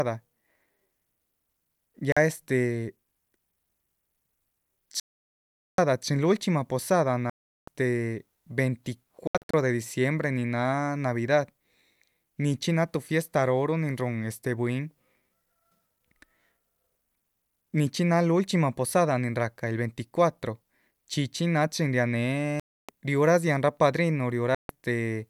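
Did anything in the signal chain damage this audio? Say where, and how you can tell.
Yes, at the wireless playback link. Abrupt silent holes at 2.12–2.17, 5.00–5.79, 7.30–7.68, 9.27–9.54 (several short gaps), 22.60–22.89 and 24.55–24.69 s point to a likely Bluetooth dropout, where late packets were discarded. Speech resumes further on, as if it had kept playing, not repeating like a buffer stutter.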